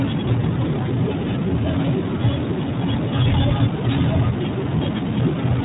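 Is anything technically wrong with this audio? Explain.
Yes. The speech has passed through the iLBC codec for its whole length. Nothing is present above about 3.8 kHz, which gives it a narrowband telephone quality. iLBC codes each frame's excitation on its own, without relying on the previous frame. Here the sound points to 20 ms frames at a rate that fits 15.2 kbps. The coding damage is plainly audible: consonants lose their crispness, and the speech sounds slightly rough and synthetic.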